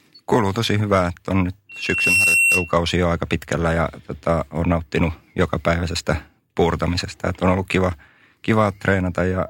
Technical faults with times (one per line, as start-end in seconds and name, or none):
1.69-2.76 loudspeaker feedback squeal